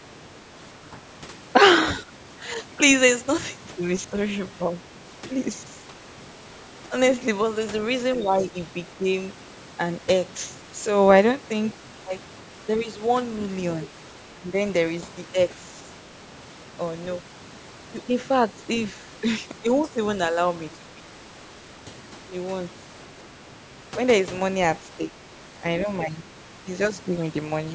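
The speech dips slightly for brief moments between 0.0 and 0.99 s and again between 8.17 and 9.0 s, losing a few decibels in short patches. This is likely speech suppressed in double talk: with both sides talking at once, the echo canceller treated the talker as echo and turned it down.

From 13.39 to 13.87 s a faint second voice sits under the speech, roughly 20 dB quieter. This is likely the other side's voice leaking through, where loudspeaker playback reached the microphone and the echo canceller did not remove all of it.

Straight after, at 14.34 to 14.54 s, the speech almost drops out, falling by about 20 dB. The same double-talk suppression returns more mildly from 19.62 to 21.02 s. It comes back once more from 25.0 to 26.94 s, where the dips reach about 10 dB.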